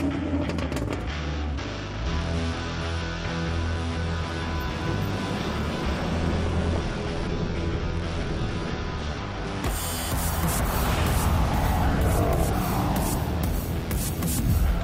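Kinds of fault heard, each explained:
No faults of any kind can be heard anywhere in the recording.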